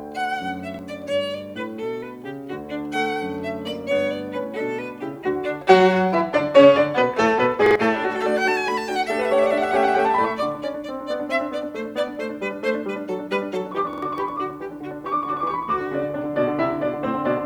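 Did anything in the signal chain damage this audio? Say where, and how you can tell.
Yes. Repeated buffer at 0.74, 7.66 and 13.93 s: the late driver replays a 46 ms slice, once then twice, with hard joins, which fits a 2048-sample buffer.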